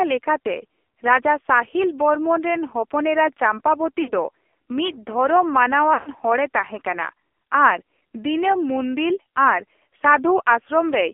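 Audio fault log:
throughout AMR narrowband mobile codec: buzzy, synthetic speech confined to 300 Hz–3.5 kHz, heavily damaged as a low mode near 5.9 kbps would be. The spectrogram is empty above 3.5 kHz.
4.02–4.12 s, 5.94–6.10 s lost AMR speech frames: the decoder repeats the last pitch and vocal tract settings at falling gain, so the sound smears, then fades. The gaps last 60 ms and 120 ms, fitting three and six 20 ms frames. The waveform shows a tapering envelope, and the spectrogram shows frozen, fading harmonics.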